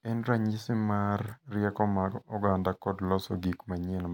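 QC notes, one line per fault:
No faults heard in this speech recording.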